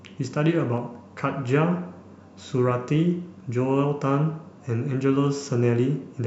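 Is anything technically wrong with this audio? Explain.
No, nothing technically wrong can be heard in this speech recording.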